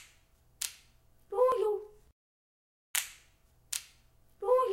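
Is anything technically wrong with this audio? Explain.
Yes. At 1.52 s the sound jumps abruptly forward, with no gap or silence. The likely cause is a dropped buffer (overrun): the recording software failed to collect a block of samples before the hardware overwrote it, so that stretch vanished and the audio on either side was spliced directly together. The missing piece is tiny, around 5 ms.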